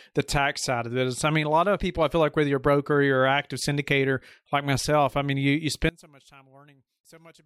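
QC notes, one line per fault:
5.89–7.46 s, one channel inverted: right after "I mean you you" the speech collapses by about 26 dB to a faint remnant that lasts to the end. This is likely one stereo channel flipped in polarity, so the centred content shared by both channels cancels in the mono sum and only their small difference survives. On the waveform the envelope drops abruptly to a sliver. On the spectrogram the low end nearly vanishes and the harmonics fade to a weak trace.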